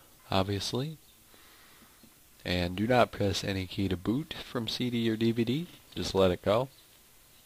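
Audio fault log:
Nothing stood out on listening.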